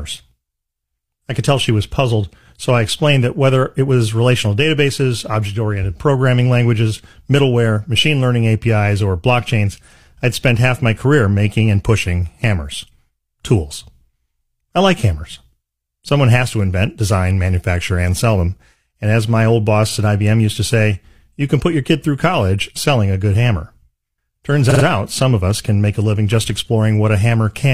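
A single compressed frame of about 46 ms was stored or sent more than once in this speech clip, causing repeated frames: at 19.88 s it plays twice, adding 46 ms, and at 24.66 s four times, adding 139 ms, each heard as a brief stutter.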